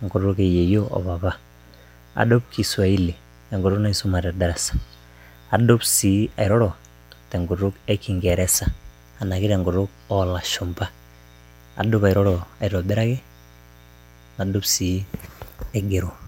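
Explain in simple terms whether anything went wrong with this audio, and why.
Yes, there is mains buzz under the speech from start to finish. Electrical interference from 60 Hz power leaks in, adding a steady, quiet, raspy hum throughout.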